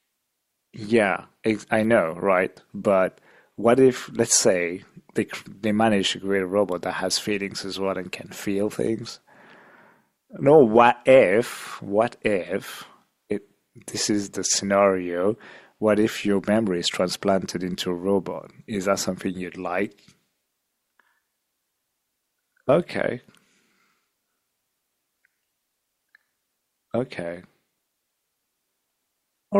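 No technical faults occur anywhere in the speech, so there is nothing to describe in time order.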